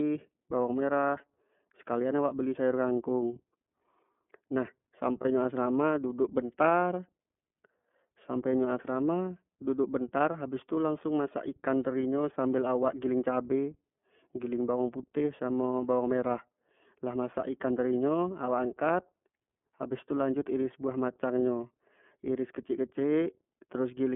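Throughout the speech, the sound is narrow, slightly rough and synthetic, with plainly audible coding damage and nothing above 3.4 kHz or below about 200 Hz. That is the iLBC codec, whose 30 ms frames point to its 13.33 kbps mode.

At 5.21 s, for about 40 ms, a brief held, faintly buzzy vowel-like sound replaces the speech before it snaps back almost immediately. These are lost iLBC frames. A gap matching one 30 ms frame was filled by repeating the last pitch cycle mixed with noise.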